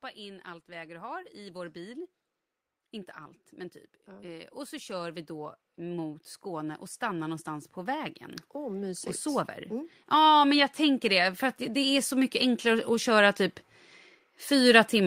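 From 0.15 to 2.1 s, automatic gain rising lifts the level by about 5 dB. The gain control judged the input too quiet and turned itself up slowly. Speech and background noise grow louder together. A longer, stronger rise follows from 4.04 to 13.43 s, adding about 18 dB. Over those nine seconds the whole sound swells steadily. The background noise climbs right along with the speech.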